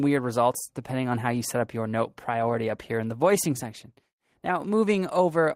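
No technical faults can be heard anywhere in the audio.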